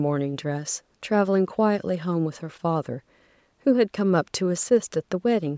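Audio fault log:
No faults are heard in this speech clip. The call microphone processing is audible only as a trimmed lowest bass and a top end that stops at 8 kHz.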